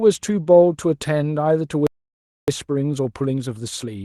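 At 1.87 s the speech cuts out into silence until 2.48 s, about 0.61 s. This playback stall was likely the player running short of data. From 2.48 s to the end, a time-compressed catch-up plays the speech about 1.1 times faster. Pitch stays normal.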